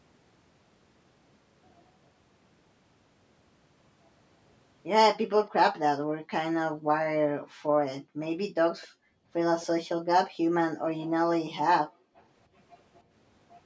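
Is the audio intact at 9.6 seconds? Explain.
No. From 9.61 to 9.67 s a faint copy of the speech returns 255 ms late. This is likely echo leak past the far end's echo canceller.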